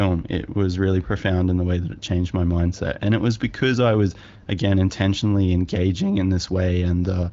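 Nothing stood out on listening to this speech, which comes through an AMR wideband (HD Voice) codec path whose audible range stops at about 7.5 kHz.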